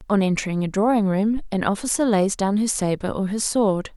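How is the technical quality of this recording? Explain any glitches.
The recording has one clear glitch: a phantom power thump from 1.37 to 1.53 s. Switching the supply on a live input puts a DC step on the line, and the coupling capacitors pass it through as a single low-frequency pulse. It is heard as a deep thud peaking at about -18 dBFS, so it stays well below clipping. The thud dies away quickly, with a decay of about 37 ms.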